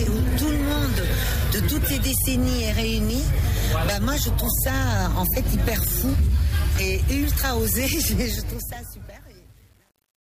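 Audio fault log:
8.22–10.34 s, truncation distortion on a fade: the fade-out stage keeps about 8 bits without dither, so from 8.72 s the tail turns gritty.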